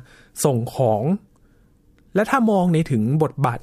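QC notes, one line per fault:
Nothing to flag here; I listened through the whole speech clip and didn't catch a single fault.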